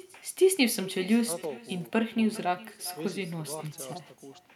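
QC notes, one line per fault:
Throughout, echo with no canceller: the speech returns around 400 ms later as a quieter, thinner copy, about 21 dB below the direct signal, because the far end's loudspeaker feeds its microphone and nothing subtracts that path before it travels back.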